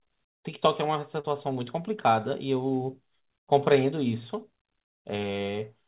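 Short concealed packet loss at 1.20 to 1.27 s: about 40 ms of the speech arrived too late to decode, so the receiver extended the preceding sound for 37 ms and crossfaded back. It comes through as a brief smeared wobble in narrowband audio with nothing above 4 kHz, which fits G.711.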